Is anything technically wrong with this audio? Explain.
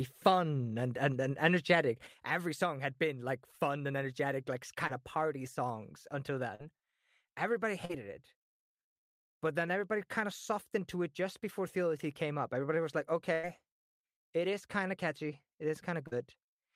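Yes, there are three kinds of fault in this speech clip.

One channel drops out at 2.07 s, right after "and and and energetic", and stays out to the end. The level falls abruptly by about 6 dB. This is likely one stereo channel going silent before the mono sum, so only the half it carried remains.

Short concealed packet loss occurs at 4.87, 6.55, 7.85 and 16.07 s. Each gap is about 40 ms, except the first at about 20 ms. The receiver bridged each gap by extending the preceding sound, heard as a brief smear or wobble before the real audio resumes.

A burst of packet loss runs from 13.33 to 13.45 s, with about 100 ms of audio missing. The receiver held the last sound and let it fade as the gap went on, giving a short sustained buzz or decaying hiss. The audio then picks up later, with that stretch skipped.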